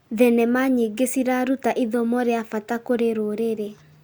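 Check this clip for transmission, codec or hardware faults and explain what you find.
Nothing faulty can be heard anywhere in this speech.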